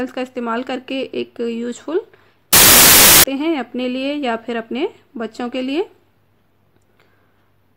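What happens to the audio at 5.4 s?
Nothing goes wrong at 5.4 s: the audio plays through that moment intact, with no dropout, glitch or other fault.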